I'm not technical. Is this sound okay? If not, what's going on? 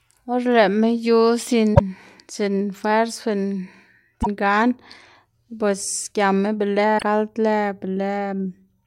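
No. Parts of the compressed audio file were damaged, so the player couldn't read those stretches properly and had to hunt for the next readable chunk. This damaged data in a compressed stream causes brief chirps or blips in the speech at 1.72–1.81, 4.19–4.27 and 6.95–7.03 seconds.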